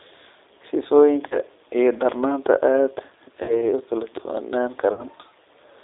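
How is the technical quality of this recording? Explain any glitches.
The quality is poor: the whole recording is narrowband, low-rate telephone speech, with three short concealed dropouts.

Throughout, the G.729 codec at 8 kbit/s limits sound to roughly 300 Hz to 3.7 kHz. Its pulse-based reconstruction gives a rough, synthetic texture, unlike a plain band-limited line.

VoIP packet loss concealed by the speech codec occurs at 1.28–1.38 s just before "iyo darnaanta", at 3.43–3.55 s, and at 4.93–5.05 s just after "kala duwanaan". Each gap is about 30 ms, except the last, about 60 ms, which fits two lost packets. The decoder stretches its last pitch and filter into a fading buzz or coloured noise, and the voice stays weakened afterward, unlike a clean cut-out.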